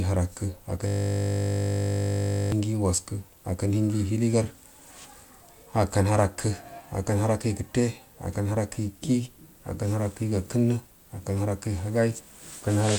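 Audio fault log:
0.87–2.52 s, system hang loop: playback froze and the output kept recycling one 20 ms block of the speech, repeated some eighty times. A loop that short fuses into a steady 50 Hz buzz rather than a stutter, replacing the sound for about 1.6 s.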